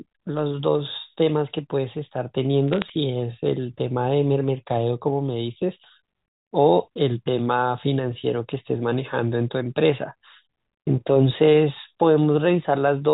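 From 2.73 to 2.90 s, a brief burst of crackle sits over the speech. These are bit errors on a digital phone line. A small fraction of bits flipped, each corrupting one sample, and hits on high bits give sharp ticks. The audio itself is G.711 telephone speech, capped at 4 kHz.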